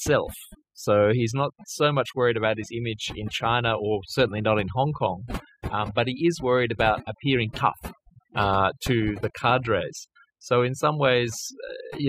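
From start to finish the speech carries overdone noise removal: an over-aggressive noise reducer has carved out any frequency band near its noise estimate, leaving near-silent gaps with twinkling specks. A spectrogram shows a blank floor scattered with isolated dots, and ragged, holed harmonics.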